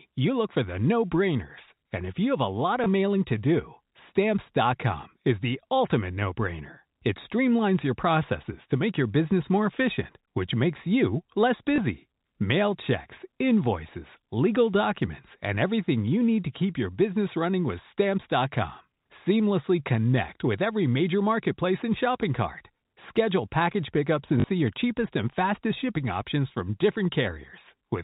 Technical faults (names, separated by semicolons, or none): packet loss with last packet repeated